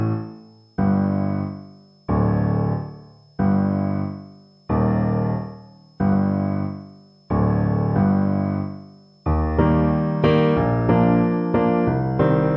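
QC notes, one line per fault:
Throughout, switching supply whistle: a faint high whistle of about 5 kHz, sitting roughly 40 dB under the sound and drifting between 5.18 and 5.31 kHz. A switching power supply is running in an audible burst mode or beating with another one, its pitch shifting as its load shifts.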